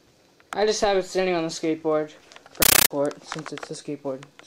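From 2.62 to 2.91 s the sound gives way to very loud, chattering static: a compressed stream played as audio, consistent with AC-3 at 640 kbps sent undecoded. Unlike random digital noise, it pulses regularly: 13.3 ms noise bursts, then silence, 31.25 times per second.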